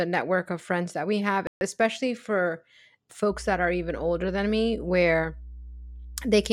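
Right after "friends that we have", at 1.47 s, the speech drops to dead silence for about 140 ms and resumes at "especially for" around 1.61 s. That gap sounds like a Bluetooth stall, likely interference holding up packets until the headphones' buffer emptied and playback paused.

From 3.29 s through to the end there's mains hum, a steady 60 Hz tone sitting roughly 15 dB under the speech. It's the power line leaking into the signal, typically through a ground loop or a transformer close by.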